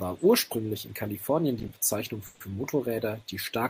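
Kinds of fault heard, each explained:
Call audio freeze: from 2.26 to 2.42 s the speech stalls, and its last sound is drawn out as a short fading buzz for about 140 ms, likely because delayed packets emptied the jitter buffer. The speech then resumes where it stopped, with nothing lost, only later.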